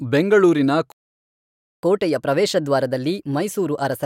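Speech that halts in a playback stall from 0.92 s to 1.83 s: about 0.91 s of silence, after which the sound resumes. The likely cause is the player running short of data or its thread being blocked. From 1.83 s to the end comes catch-up at higher speed: the backlog plays 1.15 times faster, raising the pitch by about two semitones. Because tempo and pitch climb together right after the gap, this reads as resampled catch-up rather than a standalone pitch shift.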